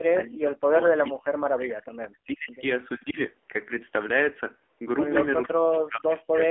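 Throughout, the speech carries heavy AMR narrowband mobile codec damage: nothing passes above 3.8 kHz, and the buzzy, synthetic texture fits a low bitrate near 6.7 kbps, unlike plain band-limiting. From 0.12 to 2.61 s and again from 5.47 to 6.46 s, the speech dips deeply, by about 40 dB. This is likely speech suppressed in double talk, where the echo canceller turns the talker down while the far side speaks. It differs from packet-loss dropouts because the gaps are level cuts gated over long stretches rather than brief frame holes.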